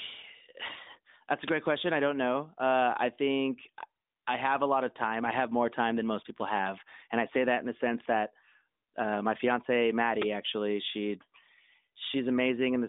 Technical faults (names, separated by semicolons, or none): uninitialised buffer